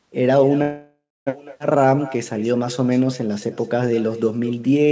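Echo with no canceller runs through the whole speech clip. Each phrase is shadowed about a fifth of a second later by a fainter copy roughly 16 dB down, as if the far end's loudspeaker fed its open microphone and nothing subtracted it before the sound returned. A call audio freeze from 0.62 to 1.29 s stretches the last sound into a fading buzz that sinks to silence for about 0.25 s. The speech then resumes where it stopped, with nothing lost but 0.65 s of added delay, the likely result of late packets draining the jitter buffer.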